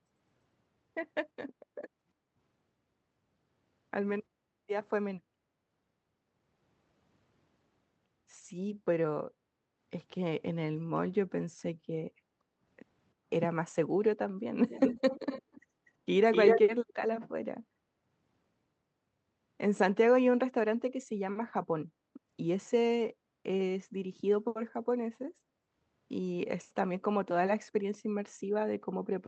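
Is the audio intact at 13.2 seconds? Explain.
No. From 13.14 to 13.29 s the background is gated by the echo canceller. It judged that loudspeaker playback was present and pulled the microphone gain down hard to keep any echo out, which also suppressed the room sound. The background ambience dips by about 10 dB for roughly 150 ms, a brief hollow gap in the room tone beneath the speech, then returns as the canceller releases its hold.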